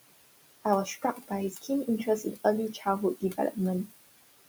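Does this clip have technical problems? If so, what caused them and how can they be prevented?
Yes. There are noise suppressor artifacts throughout. The room noise sits about 15 dB under the speech, and the suppressor pulls it down by about 20 dB frame by frame, so the leftover background dips between phrases and rises underneath. A gentler suppression depth would keep that residue steadier.

There is also speech cut by the noise suppressor at 0.85–1.31, 1.51–1.69, 2.05–2.45, 2.73–2.86 and 3.16–3.56 s. Soft parts of the speech were taken for noise and dropped by about 9 to 16 dB, so they come out swallowed. A less aggressive threshold would leave quiet speech alone.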